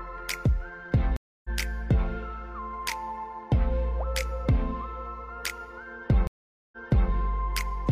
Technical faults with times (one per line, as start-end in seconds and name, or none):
1.16-1.49 stream reconnect
6.27-7.09 stream reconnect